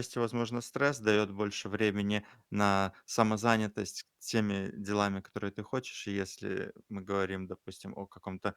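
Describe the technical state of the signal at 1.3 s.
At 1.3 s the speech signal is intact, with no fault present at that moment.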